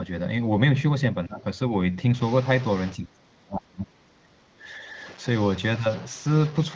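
From 1.27 to 1.44 s the speech dips by roughly 15 dB, then recovers. This is speech suppressed in double talk. An echo canceller likely mistook overlapping far-end talk for echo and turned this side down.

From 2.15 s to the end, a distortion rides on the speech, and the pauses fill with hiss. That is a stuck bit. One bit of each sample stays fixed, likely from a faulty line or converter, so values jump by its weight.

The suppression returns. From 2.96 to 4.43 s the speech sinks by as much as about 30 dB, in places nearly gone. From 4.59 to 4.88 s a milder dip follows, only about 5 dB.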